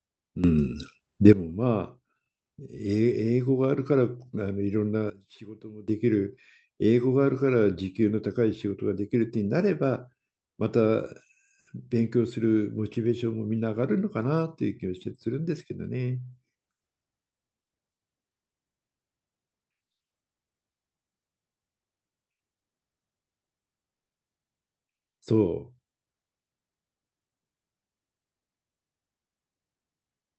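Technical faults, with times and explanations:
0.44–1.33 s, sudden gain jump: the level of the speech and its background noise steps up together by about 12 dB with no ramp, then drops back at 1.33 s, likely a gain setting or bit shift applied instantly, so each edge can click.
5.10–5.88 s, sudden gain jump: a second instant change, this time a drop of about 16 dB, pulls the speech and noise floor down together for just under 0.8 s before restoring, again likely an unramped digital gain step, so the level shift is abrupt rather than faded.
23.93–24.12 s, call audio freeze: packets likely stalled in transit and the jitter buffer ran dry, so the receiver inserted 170 ms of silence; nothing was lost, the speech simply resumes where it stopped, pushed 170 ms later, through the Opus call path with its band-limited sound.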